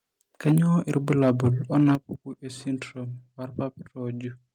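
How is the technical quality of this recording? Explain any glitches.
The recording has real problems: the loudest parts of the speech break up three times, and the level drops abruptly twice.

Microphone overload shows up from 0.46 to 0.58 s, 0.96 to 1.48 s and 1.75 to 1.95 s. The signal runs about 6 dB past full scale in the first two and about 3 dB in the third, so peak tops get sliced flat. It's worst in that first burst, where around a tenth of the waveform is cut. The likely cause is the mic input gain being set too hot for the converter, and you hear it as a harsh, crackly edge on the loudest syllables.

The microphone volume is stepped down at 0.52 s and 1.95 s, the first in the middle of the first clipped stretch and the second right on the back of the last one. The first drop is about 3 dB and the second a much bigger 10 dB, so both the speech and the background suddenly sit lower. 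That pattern fits the call software's automatic gain control, which likely saw the overload and pulled the device input down in one jump rather than easing it.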